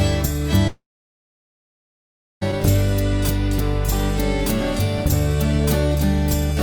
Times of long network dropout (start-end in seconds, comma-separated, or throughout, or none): 0.67-2.43